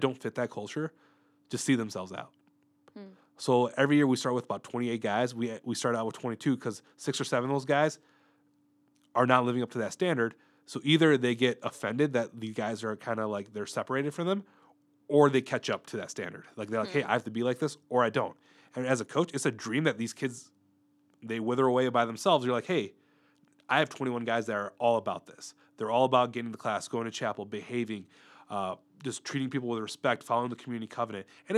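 A speech recording, and nothing is technically wrong with it.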